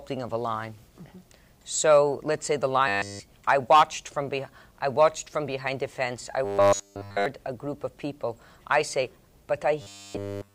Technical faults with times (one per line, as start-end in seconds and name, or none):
2.88-3.21 robotic sound from repeated short buffers
6.45-7.26 robotic sound from repeated short buffers
9.82-10.54 robotic sound from repeated short buffers